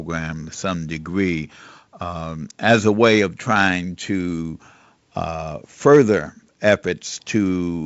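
No technical faults are present in this speech, which carries the signature of G.722 wideband telephone coding: nothing above 7.7 kHz, and light coding texture that fits the 56 kbit/s mode.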